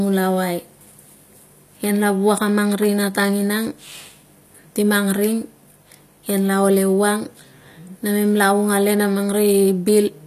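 Speech throughout, with plainly audible HE-AAC compression, likely from a low bitrate near 24 kbps. The sibilants sound gritty and metallic, and a spectrogram shows repeated, blocky treble bands stopping flat at 14.9 kHz.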